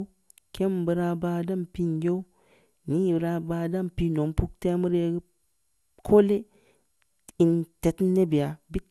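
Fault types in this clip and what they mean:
Generation loss: this speech sounds swirly, smeared and hollow throughout, with blurred consonant attacks, likely from roughly ten passes through an MP2 coder near 128 kbit/s, each re-quantising on a shifted frame grid; a spectrogram shows nothing above 12.6 kHz.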